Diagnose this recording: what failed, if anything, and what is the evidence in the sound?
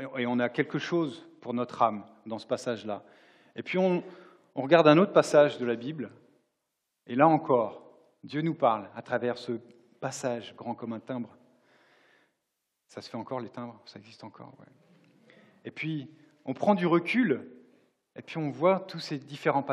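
Nothing in the recording stood out as a fault on listening.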